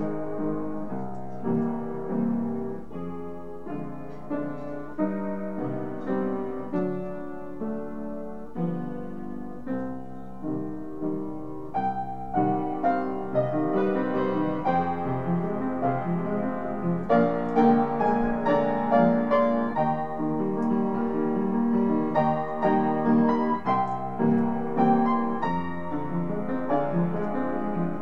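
A DC step occurs at 1.55 s, where the waveform's zero line jumps to a new resting level, offset by about -42 dBFS, as happens when a converter recalibrates or an input carrying an offset is switched in. The shifted baseline persists until 24.39 s. The jump is heard as a low thump or click, while the sound itself continues unchanged.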